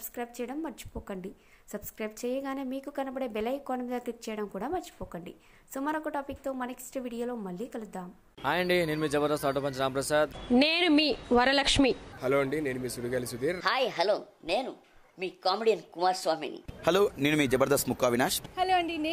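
Sample clock jitter runs throughout: roughly a microsecond of timing wobble adds a hiss, roughly 40 dB down, that rises with loud, bright passages and vanishes in silence.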